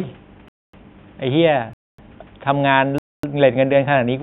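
Gaps between chunks open at 0.48–0.73, 1.73–1.98 and 2.98–3.23 s: hard-edged 250 ms silences every 1.0 s chunk, seen as clean vertical blank bands and flatline waveform, interrupting without losing sound.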